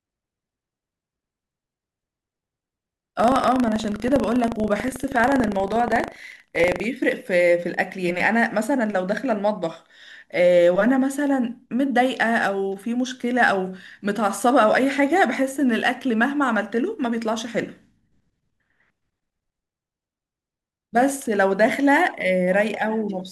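From 0 to 6.86 s the speech carries buffer tearing: a steady robotic rattle at 25 Hz, which points to a buffer period of about 40 ms. The writing program and the playback hardware have drifted out of step, so their positions cross inside every period. A small slice of each buffer, a few percent, still holds audio from roughly 70 ms earlier, bounded by hard joins that produce the buzz while sound is present.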